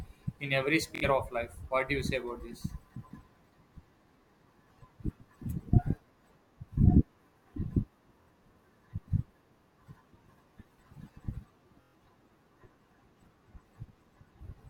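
Bluetooth stutter strikes at 0.95 s after "in every", then at 8.22 s and 11.82 s. Lost packets make the receiver replay a tiny slice, a brief buzz. Speech resumes about 70, 46 and 116 ms later.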